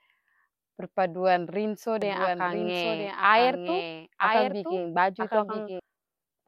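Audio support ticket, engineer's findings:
Doubled audio track, 2.02 s to 5.80 s. A second full-band copy of the speech runs about one second behind, about 5 dB quieter. No decay or room colour. Abrupt start and stop. Likely a slower duplicate capture path mixed in.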